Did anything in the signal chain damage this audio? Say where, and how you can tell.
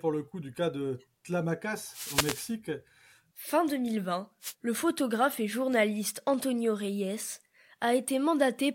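Yes. The damage is on the radio link of an analogue FM wireless microphone, before the receiver output, as two wireless microphone noise hits: 1.87 to 2.56 s, and a shorter one from 4.41 to 4.54 s, just before "le photographe et journaliste". When reflected copies of the transmission cancel at the receiver, the carrier fades and the receiver's own noise rises over the speech, heard as a swish or burst of static.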